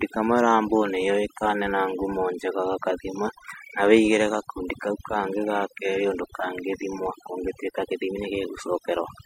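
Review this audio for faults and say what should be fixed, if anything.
Overdone noise removal runs throughout the speech. The noise reduction is set too aggressively, so frequency bands near its noise estimate are pulled down or cut entirely. Quieter parts of the voice vanish with them, leaving a lowered background that breaks up into twinkling, warbling specks.

To prevent it, use a gentler reduction amount and compare the processed and unprocessed audio before committing.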